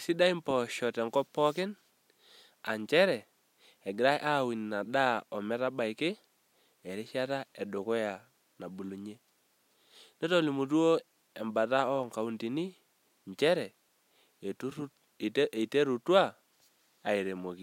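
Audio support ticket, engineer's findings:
Nothing stood out on listening; no findings to log for this speech clip.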